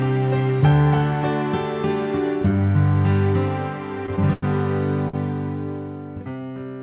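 Short stalls from late packets turn up at 4.06, 4.33 and 5.08 s. Each time the jitter buffer ran dry and the receiver stretched the last sound by about 21, 93 and 50 ms before picking up where it left off. You hear a brief held, slightly buzzy smear, longest at 4.33, over a narrowband call sound with nothing above 4 kHz.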